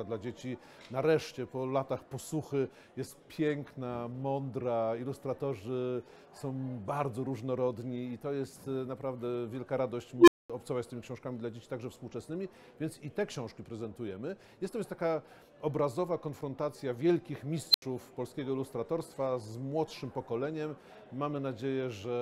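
At 10.18 s and 17.71 s an unstable filter runs away. A tone near 300 Hz, then one near 4 kHz, swells in 98 and 33 ms, then falls silent for 220 and 80 ms, unlike feedback howl.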